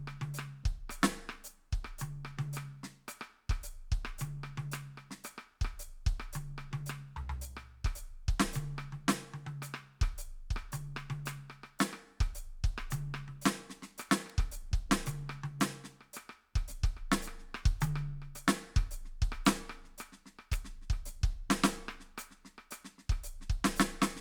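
A piece of music carries two sharp, isolated snaps laid over the top of it, one at 14.30 s and another at 20.53 s, each over in a few milliseconds and unrelated to the musical material. These are electrical switching spikes, likely from a nearby switch, motor or static discharge arcing briefly and being picked up by the audio line, so the crack is added on top of the sound rather than interrupting it.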